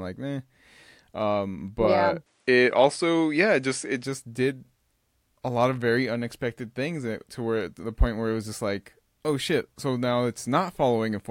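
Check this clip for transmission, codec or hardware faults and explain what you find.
Input switched to a poorer device, from 2.26 to 4.04 s, just after "but yeah". The input has likely changed mid-recording to a weaker microphone. Its narrower passband removes everything above 10.4 kHz, so the speech loses air and sounds duller. Its different gain shifts the level by about 5 dB, and a faint new noise floor sits well below the speech. The change happens with no silence, and the original brightness returns at 4.04 s.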